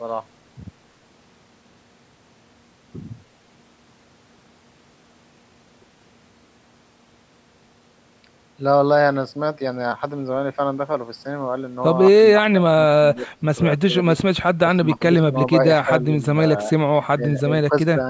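Speech suppressed in double talk occurs at 12.33, 13.15, 14.67, 15.85, 17.17 and 17.69 s. Each time, the speech dips by up to about 25 dB or briefly drops out. This is likely an echo canceller mistaking overlapping talk for loudspeaker echo and turning it down.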